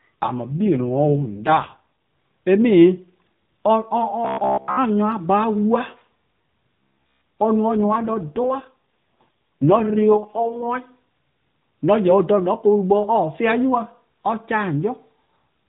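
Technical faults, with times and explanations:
0.46 to 1.83 s and 7.76 to 10.67 s, AMR rate drop: in both stretches the speech turns rougher and more synthetic. The bandwidth stays the same and there is no gap. The roughness fits the codec being pushed from about 12.2 kbps down to 4.75 kbps, as a weak radio link diverts bits to error protection. With far fewer bits for the vocal-tract model, the voice loses natural detail until the higher rate returns.
4.25 to 4.77 s, robotic sound from repeated short buffers: for about half a second the speech becomes a rigid, metallic buzz near 66.8 Hz that still roughly tracks the words. That pitch points to a fragment of about 15 ms being replayed over and over. This is likely from audio arriving too late, so the playback repeated its last buffer to fill the time. Most of the real audio in that span is skipped, and the fixed repeat rate imposes its own monotone pitch.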